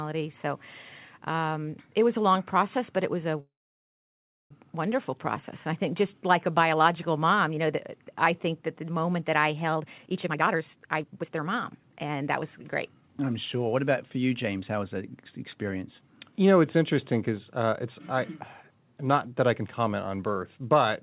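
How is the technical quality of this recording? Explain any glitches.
The recording has two timing glitches, a stall and a stretch of hurried playback, over narrowband call audio with nothing above 4 kHz, which points to a 64 kbps G.711 A-law call codec.

From 3.4 to 4.52 s, right after "but it was a", there is a call audio freeze. Playback halts for about 1.1 s, most of it (about 1.0 s) silent, then resumes at "wonderful process" with nothing lost. The likely cause is delayed packets draining the jitter buffer, with the receiver waiting rather than skipping ahead.

From 9.72 to 13.09 s, after "the moment that I" and up to "I'm sure", a jitter buffer speed-up plays the speech at about 133% speed with unchanged pitch, so it sounds rushed. The buffer had built up excess delay and trimmed roughly a second by repeatedly cutting short pitch-period segments.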